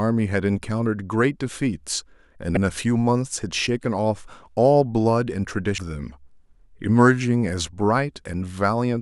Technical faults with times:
2.54-2.57 damaged data in a compressed stream
5.75-5.78 damaged data in a compressed stream

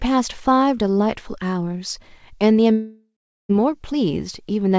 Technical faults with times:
2.72-3.51 long network dropout

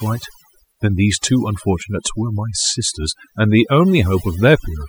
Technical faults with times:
0.00-4.88 overdone noise removal

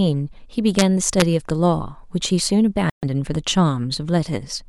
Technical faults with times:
0.79-0.82 integer overflow
1.20 integer overflow
2.90-3.04 Bluetooth stall

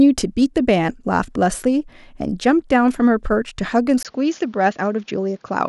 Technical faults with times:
4.03-5.68 input switched to a poorer device

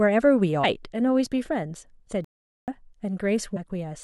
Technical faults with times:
0.63 damaged data in a compressed stream
2.24-2.68 playback stall
3.55-3.57 damaged data in a compressed stream

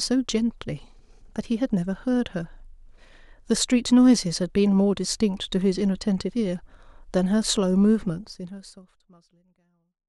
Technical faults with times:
none

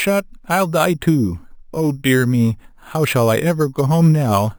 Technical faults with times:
0.00-4.59 imaging from sample-and-hold upsampling

